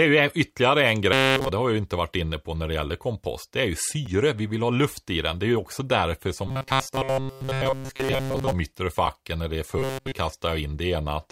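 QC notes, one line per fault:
1.13–1.49 s, 6.48–8.52 s and 9.79–10.13 s, robotic sound from repeated short buffers: a rigid metallic buzz at 133 Hz, entirely in the first stretch and mostly in the later two. The likely cause is a roughly 7.5 ms slice of audio repeated while late-arriving audio was skipped.
4.06 s and 9.07 s, gap between chunks: 6.5 ms holes, five seconds apart, where silence sits at the join between 5-second chunks of audio.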